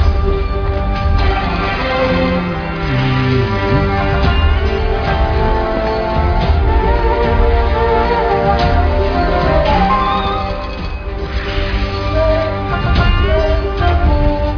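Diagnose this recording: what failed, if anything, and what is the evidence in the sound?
Nothing stood out on listening that would point to a failure at any stage of the chain.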